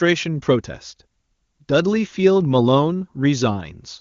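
No technical faults are audible in the speech, which carries the band-limited clarity expected of the AMR wideband (HD Voice) codec at a high rate, likely its top rate of around 24 kbit/s.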